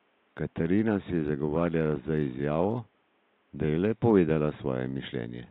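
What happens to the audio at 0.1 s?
Nothing goes wrong at 0.1 s; the speech is intact there, with only the room's own background noise sitting about 43 dB below it.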